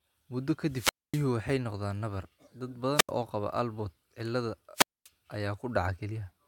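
A wireless microphone's radio link fades three times in this speech recording, triggering squelch dropouts. The receiver mutes its output as the signal weakens, so hiss rises, then near silence lasts about 0.25 s at 0.65–1.33 s, 0.08 s at 2.94–3.11 s, and 0.24 s at 4.75–5.09 s.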